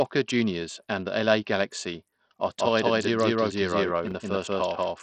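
Speech, and the whole clip carries the sound of Bluetooth SBC compression, with heavy codec damage throughout. The treble is thin and flickers, and a gritty noise and some aliasing ride on the speech. This is the sub-band codec running short of bits: the weaker upper bands are starved or dropped, and the rest are coarsely quantised. The degree of damage fits a low bitrate around 64 kbps, and nothing is present above 20.9 kHz. The likely cause is an SBC Bluetooth link with a small bit pool. From 2.58 s to the end, a doubled audio track appears. A second full-band copy of the speech, roughly as loud as the original, trails it by about a fifth of a second. The copy has no decay or room colouring, and it cuts in abruptly at 2.58 s. That points to the same signal being mixed in twice, most likely captured again over a slower parallel path. Between 4.08 and 4.12 s the audio has chunks out of order. 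A segment plays after the material that should follow it, which produces a brief jumbled moment with three hard joins. The spacing fits blocks of 10.67 ms, with one block delivered about three blocks late. No audio is lost, only misordered.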